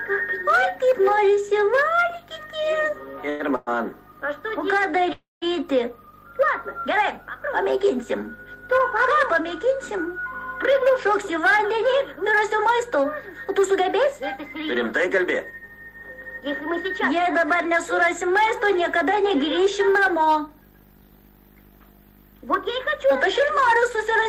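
Call audio freezes occur at 3.29–3.42 s, 3.56–3.69 s and 5.13–5.44 s, likely from delayed packets draining the jitter buffer. Each stretches the last sound into a fading buzz. The longest falls silent for about 160 ms before resuming.

Jitter buffer speed-up follows at 10.69–14.64 s, 15.06–18.31 s and 23.13–24.26 s. Short pitch periods are cut repeatedly. The audio runs 4 to 6 percent fast at unchanged pitch and sounds hurried in the first two stretches.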